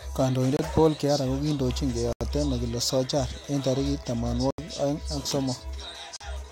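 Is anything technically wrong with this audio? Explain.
Yes. The speech drops to dead silence four times, at 0.57 s for about 25 ms, 2.13 s for about 81 ms, 4.51 s for about 77 ms and 6.17 s for about 40 ms. Each gap is an abrupt hole with no fade. The likely cause is a Bluetooth stall: radio interference delayed packets, the headphones' playback buffer emptied, and output halted until retransmitted audio arrived. The gaps near 2.1 s and 4.5 s are the longest.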